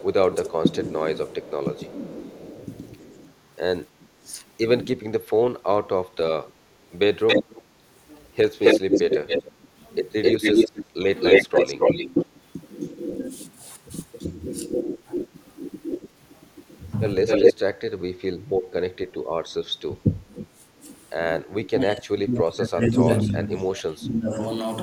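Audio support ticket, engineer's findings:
Speech suppressed in double talk, 0.0–6.34 s: talker dips in pieces, about 1.5 s total, deepest about 20 dB. Likely cause: echo canceller ducking its own talker along with the echo while far end speaks.
Same, 9.51–11.7 s: brief dips, about 0.3 s total, about 15 dB.
Same, 17.97–24.4 s: worst case, about 3 s affected, down about 30 dB.
Differs from gating: the speech itself drops, not just room tone.

Echo leak, 0.0–19.14 s: delayed copy of the speech, 265 ms behind, louder than the speech itself. Likely residual loudspeaker pickup is not cancelled and gets sent back.
Again 23.16–23.65 s, same 265 ms delay, about 15 dB under the speech.
Differs from room reverb: a distinct repeat at a fixed lag, not a smooth decay.

Background gated by the echo canceller, 20.39–20.51 s: room sound drops about 11 dB for roughly 0.1 s, then returns. Mic attenuated hard during loudspeaker playback.
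Differs from double-talk suppression: a momentary hole in the background floor, with no talker chopped.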